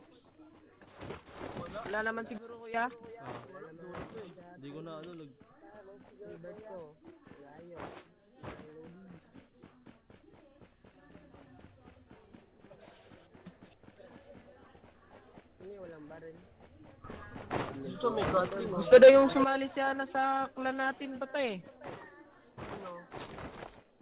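From 2.38 to 2.74 s the level and background noise drop together by about 15 dB, then from 17.04 to 19.44 s they leap up by about 11 dB. These are sudden gain jumps, likely digital gain switched abruptly without any ramp, heard through a narrowband call path with nothing above 4 kHz.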